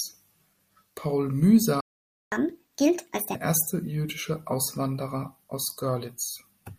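A speech recording in which the output drops to silence at 1.80 s and stays silent until 2.32 s, a gap of about 0.51 s that breaks the speech mid-flow. That is a playback stall, most likely the player running out of buffered data or having its audio thread blocked, so nothing reached the output until it recovered. Immediately after the gap, from 2.32 s to 3.35 s, the speech runs at 1.5 times normal speed and sounds audibly higher, raised by about seven semitones. This is catch-up at higher speed: the player resamples the backlog that built up during the silence and plays it faster to win back the lost half second. Because resampling changes pitch and tempo together, both rise over that stretch and then drop back to normal once the delay has been absorbed.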